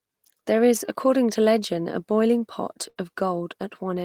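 At 2.89 s, a burst of packet loss drops about 60 ms of speech. The receiver stretches the last sound into a fading buzz or hiss until 2.98 s, then resumes.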